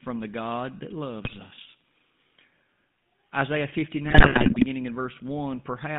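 From start to end the speech has a buzzy, gravelly roughness and a narrow band of roughly 150 Hz to 3.6 kHz. That is the GSM full-rate codec, which fits a 13 kbps coder: it models the vocal tract and excites it with sparse, regularly spaced pulses. From 1.24 to 1.39 s, and again from 4.08 to 4.65 s, the sound breaks into squawks, pops and gargling. These are GSM bit errors. Corrupted filter, pitch and gain values distort the spectrum and level frame by frame, and the longer second burst points to many more frames being hit.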